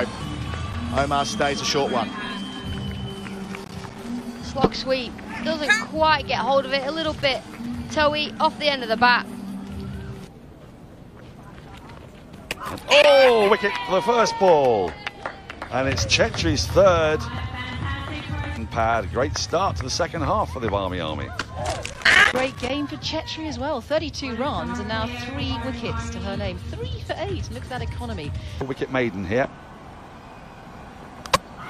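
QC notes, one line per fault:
3.45–4.21 s, 7.19–7.78 s and 21.93–22.70 s, loose connector crackle: a worn or dirty contact keeps making and breaking, chopping the signal into irregular scratchy bursts. The waveform shows jagged dropouts and spikes, and the spectrogram shows scattered broadband vertical streaks.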